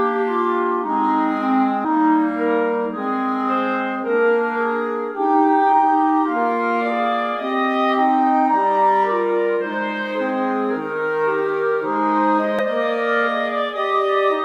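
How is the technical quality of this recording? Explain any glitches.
Two brief glitches mar the recording, at 1.84 s and 12.59 s. Each is a short chirp or blip from damaged data in a compressed stream: corrupted bytes made the decoder misread those frames and lose sync until it found the next valid frame header.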